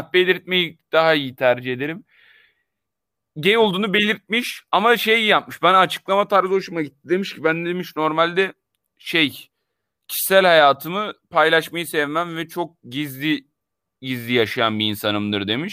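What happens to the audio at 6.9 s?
Nothing goes wrong at 6.9 s; the speech there is intact, with no audible fault.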